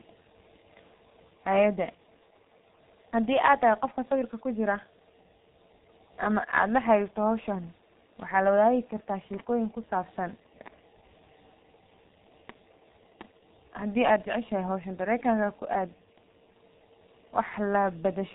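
From start to finish the speech has been through the G.723.1 codec, squeezed hard enough that it points to a bitrate near 6.3 kbit/s. The coder analyses the signal in 30 ms frames and rebuilds it from a coarse, slowly updated vocal model, and nothing survives above 3.8 kHz. The damage is heavy: the speech sounds muffled and hoarse, sibilants and plosives smear together, and consonants lose their edges throughout.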